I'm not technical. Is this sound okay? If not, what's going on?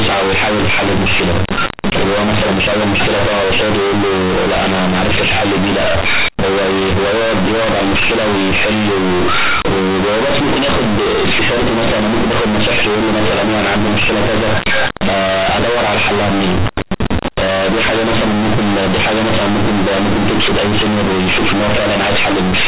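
No. From start to finish the speech has companded audio read as linear: the mu-law telephone bytes are played as plain 8-bit samples without being expanded back. Quiet and loud parts come out equally huge, causing harsh, buzzy distortion and loud hiss in pauses.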